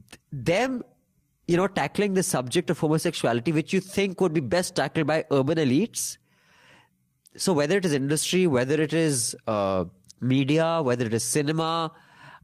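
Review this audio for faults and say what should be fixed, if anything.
Four brief rough patches are lost packets rebuilt from error correction, at 3.05–3.11, 5.81–5.87, 7.97–7.99 and 11.59–11.61 s. There are no gaps. Each lost packet was replayed from a low-bitrate copy in the next packet. The first two last about 40 ms, which fits two lost packets each. The last two last about 20 ms, which fits one packet each. The rebuilt sound is grainier and noisier. To prevent it, reduce packet loss on the network path, for example with a wired link or less congestion.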